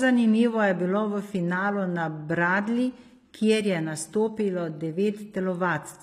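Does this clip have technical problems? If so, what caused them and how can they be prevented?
Yes. HE-AAC compression damage runs through the whole clip, and it is plainly audible. The upper range of the speech sounds bright but synthetic: s sounds come out gritty and lispy, and nothing is left above 15.5 kHz. That points to HE-AAC v2 at a low rate, around 24 kbps. Only the lower band carries real detail, and the treble is likely rebuilt by copying lower bands upward under a coarse envelope, so its harmonics don't match across the join. To prevent it, encode at a higher bitrate with plain AAC-LC or another full-band codec instead of a low-rate HE-AAC profile.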